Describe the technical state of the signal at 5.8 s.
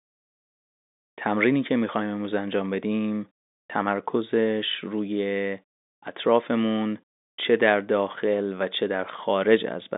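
At 5.8 s the audio is intact, carried normally through G.711 telephone coding with its band ending at about 3.8 kHz.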